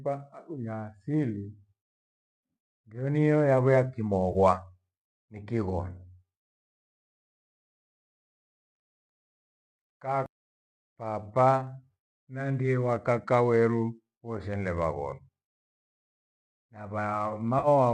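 At 4.32 s, right after "ndio niyo yavo ya", comes an AAC frame loss with concealment: about 30 ms of missing data, consistent with three lost 10 ms low-delay frames, which the decoder patches from the last good spectrum. It sounds like a brief smeared, noisy blur. A second, longer patch of about 50 ms follows at 17.59 to 17.68 s. On a spectrogram each shows as a smudged block with blurred harmonics.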